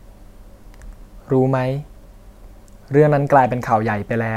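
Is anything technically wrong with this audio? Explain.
No, the signal shows no technical faults that a listener can pick out anywhere in the recording.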